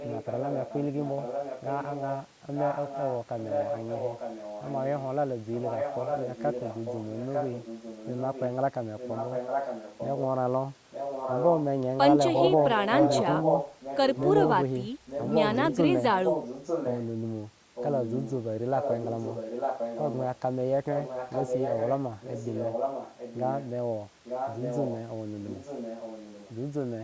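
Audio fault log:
0.0–10.23 s, 10.91–11.65 s, 12.35–14.48 s, 15.06–17.05 s, 17.75–23.69 s and 24.24–26.54 s, echo leak: a delayed copy of the speech trails the original by about 0.9 s through nearly the whole clip. It's mostly well below the direct speech, climbing to roughly equal level around 12.35–14.48 s. The likely cause is a far end on loudspeaker whose echo canceller let its own mic pickup slip through and come back to us.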